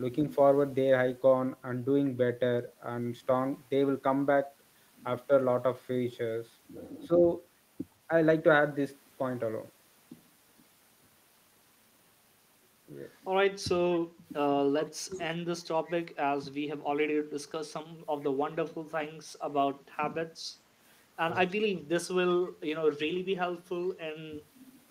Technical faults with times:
7.07-7.11 speech suppressed in double talk
18.21-18.26 echo leak
21.35-21.39 echo leak

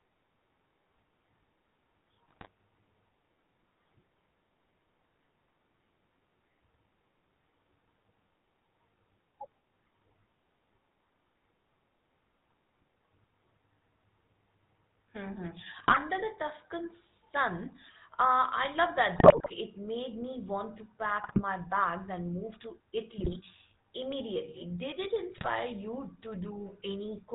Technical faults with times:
0.00-27.34 GSM full-rate codec
2.28-2.47 GSM bit errors
15.78-15.97 GSM bit errors
19.16-19.53 GSM bit errors
21.24-21.42 GSM bit errors
23.18-23.37 GSM bit errors
25.38-25.49 GSM bit errors

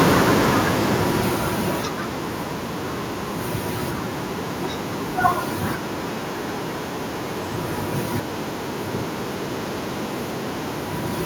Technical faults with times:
0.05-2.14 automatic gain falling

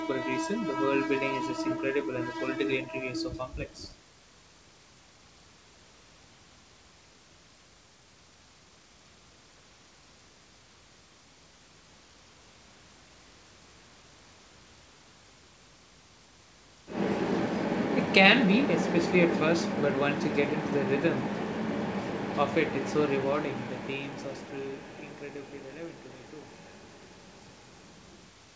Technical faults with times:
none

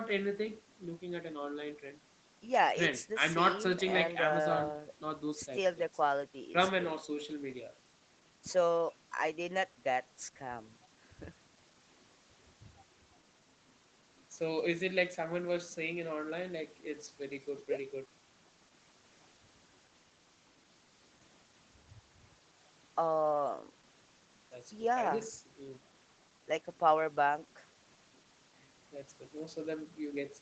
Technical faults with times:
none

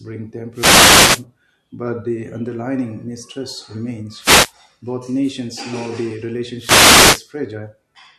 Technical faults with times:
0.53-1.25 wireless microphone noise hit
4.18-4.53 wireless microphone noise hit
6.57-7.26 wireless microphone noise hit

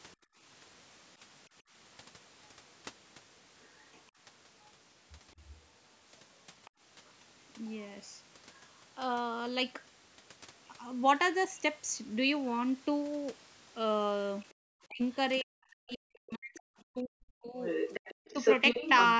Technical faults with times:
0.16-1.73 background gated by the echo canceller
3.62-4.01 other side's voice leaking through
6.65-6.71 other side's voice leaking through
14.50-19.10 other side's voice leaking through
14.54-14.59 background gated by the echo canceller
14.87-18.38 speech suppressed in double talk

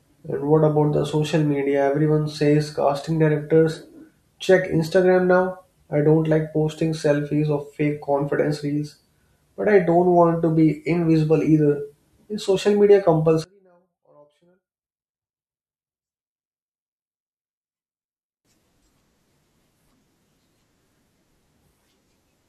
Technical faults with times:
13.44-18.45 one channel inverted

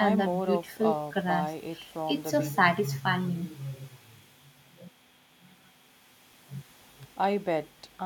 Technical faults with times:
none

